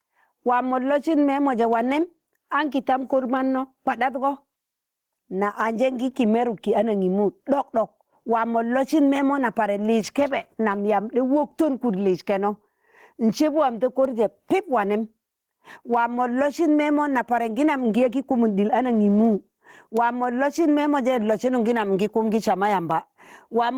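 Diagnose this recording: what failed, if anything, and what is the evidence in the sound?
Gain pumping runs through the whole speech clip. The swing is around 10 dB, and it follows each loud syllable rather than the overall level. Loud and quiet passages sit unnaturally close together, so the speech sounds squashed. The likely cause is microphone gain set far too high at the input stage, with a fast limiter or compressor in the call processing clamping each peak.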